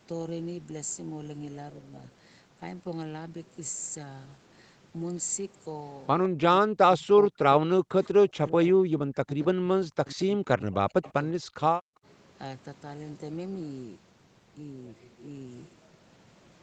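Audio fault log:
6.29–12.06 s, speech suppressed in double talk: with both sides talking at once, the echo canceller likely could not separate this talker from loudspeaker echo and turned both down. The speech dips by up to about 40 dB and breaks into pieces at 6.29–6.42, 6.62–7.43, 7.59–8.56, 8.72–11.14, 11.33–11.61 and 11.78–12.06 s.
8.04–8.08 s and 11.02–11.13 s, echo leak: the far side's echo canceller, on a loudspeaker call, likely left part of its microphone pickup in place and sent it back. A faint copy of the speech follows 154 ms late in brief scraps, about 30 dB and then 25 dB below the speech.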